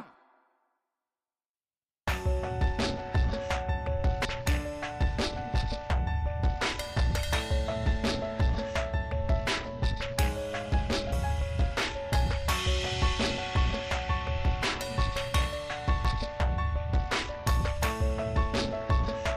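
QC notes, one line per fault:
4.25 s, 11.12 s, 16.05 s: damaged data in a compressed stream. Corrupted bytes in the coded stream make the decoder misread or discard frames, lose sync and hunt for the next valid frame header, so each point breaks into a brief, harsh chirp or blip.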